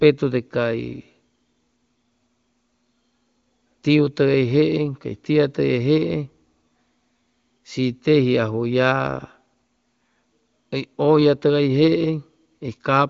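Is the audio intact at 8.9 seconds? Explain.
Yes, the speech at 8.9 seconds is intact, with no fault at that moment.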